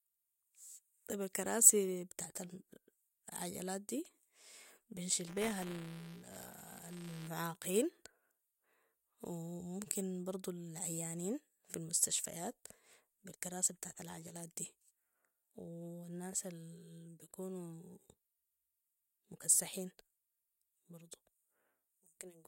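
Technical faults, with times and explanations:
5.27 to 7.28 s, buffer tearing: a robotic 200 Hz buzz, because each 5 ms period splices in a sliver of audio from roughly 10 ms earlier, hard-joined.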